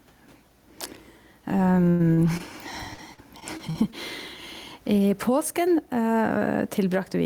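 Gain pumping runs through the whole clip: the level swings by a few dB, with loud and soft parts squashed closer together, likely from excessive input gain driving a fast limiter. The room noise sits about 42 dB below the speech.

A burst of packet loss at 1.89 to 2.01 s drops about 100 ms of audio; the receiver stretches the last sound into a fading buzz or hiss before the speech resumes further on.

Short concealed packet loss follows at 2.13 to 2.19 s (about 40 ms) and at 2.37 to 2.41 s (about 20 ms), each patched by extrapolation and heard as a brief smear or wobble.

Repeated packet loss (robotic sound) spans 2.93 to 3.94 s, with the longest gap about 44 ms and roughly a fifth of the stretch filled in. The back-to-back patches make the speech choppy.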